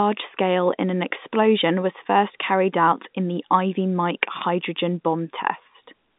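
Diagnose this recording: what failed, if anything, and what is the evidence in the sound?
Nothing stood out on listening; the speech sits within the narrow band of an ordinary G.711 telephone line, with nothing heard above about 3.8 kHz.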